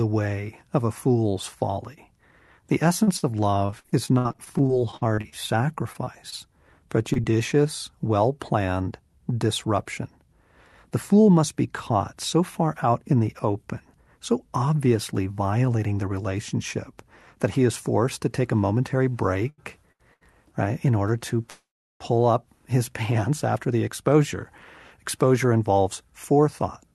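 From 3.03 to 7.35 s the speech turns choppy, with many short holes up to 64 ms, about 15 percent of the stretch. This is repeated packet loss: each hole was patched by extending the previous sound, and 560 ms of speech is missing. Between 8.82 and 11.91 s the speech runs at unchanged pitch, about 3 percent fast. This is a jitter buffer speed-up, where the receiver trimmed tiny pitch-period slices, roughly a tenth of a second in total, to cut built-up delay. From 19.10 to 20.68 s the speech drags and stutters through five brief holds, the longest 86 ms. These repeated stalls happened because the jitter buffer kept running dry, so the last sound was stretched until packets arrived, with nothing lost. At 21.50 s a call audio freeze sets in: a short fading buzz, then near-silence, about half a second in all. The likely cause is packets held up in transit, and speech resumes where it stopped. 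From 23.56 to 26.88 s a second jitter buffer speed-up runs about 5 percent fast, removing roughly 0.2 s so the speech sounds rushed. Throughout, the call codec limits the band near 12 kHz.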